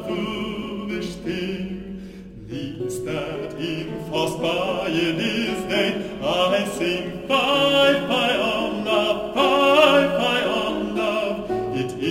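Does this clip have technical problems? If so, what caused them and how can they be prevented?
Yes. Crude rate conversion runs throughout. Samples were dropped without filtering, fitting a 48 kHz to 44.1 kHz change. Gritty, inharmonic fizz sits about 25 dB below the sound. Prevent it by using a proper band-limited resampler.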